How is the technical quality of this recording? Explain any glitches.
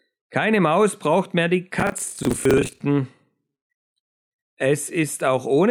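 The recording has one clear glitch. From 1.80 to 2.81 s, right after "braucht mehr die", processor overload crackle appears: dozens of missed deadlines, each repeating stale audio and fitting roughly 10 ms buffers, give a gritty tearing rather than a single dropout or clipping distortion.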